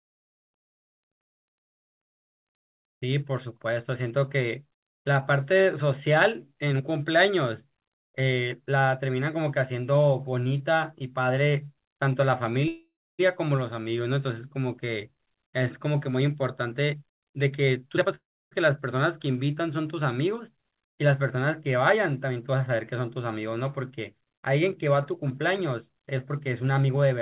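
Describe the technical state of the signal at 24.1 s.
At 24.1 s the speech is intact, with no dropout, glitch or distortion; it carries the narrowband character of the call path, with nothing above 4 kHz.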